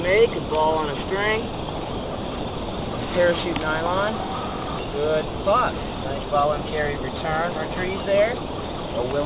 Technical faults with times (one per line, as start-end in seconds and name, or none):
0.00-9.25 aliasing